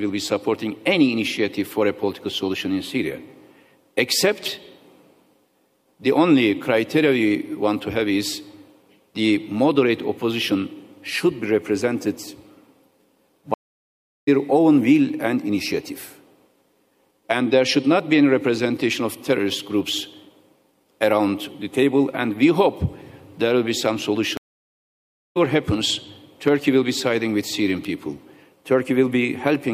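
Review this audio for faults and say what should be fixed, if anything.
There are two stream reconnects here. At 13.54 s the sound drops out for about 0.73 s, coming back at 14.29 s, and at 24.37 s it goes silent for about 0.98 s until 25.37 s. Each time the connection broke, the player sat silent, then reconnected and spun up a fresh decoder mid-stream. That's why the sound picks up roughly 0.4 s and 0.5 s further along rather than where it left off, with the first frame or so muted or fading in. To prevent it, give the player a bigger jitter buffer and make it resume by byte offset or timestamp so a brief network drop doesn't force a full reconnect.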